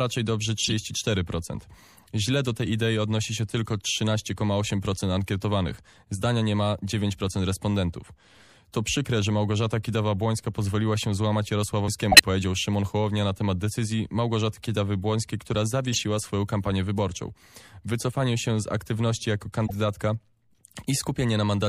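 The speech has a watery, swirly quality from start to end, with dulled treble and smeared consonant attacks. The likely cause is MP3 compression at a low bitrate, which fits roughly 64 kbps. Starved of bits, the encoder cuts the highest frequencies at a fixed point. It also drops weak spectral detail, which flickers in and out between frames. The damage is plainly audible.

At 0.62 to 0.73 s there is a sharp chirp with a burst of noise. This is a corrupt frame decoded. Flipped bits in a few compressed frames were played anyway, so energy landed at the wrong frequencies. It is fairly loud.

At 11.88 s, just after "pozwoliła się złamać", a CD skip occurs. The laser jumped to another turn of the disc's spiral. Playback mutes for only a few milliseconds, then resumes from a different place. It is heard as a tick and a sudden jump in the speech.

Three more corrupt frames decoded follow. At 12.12 to 12.20 s the blip is the loudest of all, near full level. 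At 15.92 to 15.99 s, just before "swoją kampanię wyborczą", a quieter squeak spans a few frames. At 19.67 to 19.74 s, right after "się z aktywności jako", a faint burst appears. Each lasts about as long as the damaged frames.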